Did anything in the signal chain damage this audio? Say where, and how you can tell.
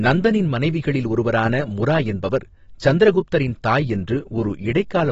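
Yes, at the codec stage, likely AAC compression: throughout the speech nothing sounds above 7.6 kHz, and sibilants turn fizzy and warbling, which fits AAC-LC at about 24 kbps. A plain low-pass or resampling cut would dull the sound without that smeared, swirling texture.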